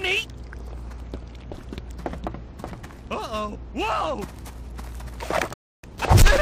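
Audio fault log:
5.54 to 5.83 s, rebuffering stall: the sound drops to silence for about 0.3 s, then picks up exactly where it left off, with nothing skipped or repeated. The playback buffer ran dry before the next stretch of audio had arrived, so the player simply waited. Because it paused rather than discarding anything, the gap is pure added time, and the audio on either side joins without any missing material.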